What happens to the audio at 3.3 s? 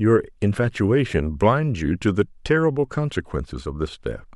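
Nothing goes wrong at 3.3 s; the speech there plays through intact, with no dropout, click, distortion or other fault.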